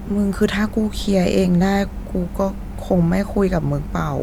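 Nothing goes wrong anywhere in this short bit of speech, so there's really nothing to flag here.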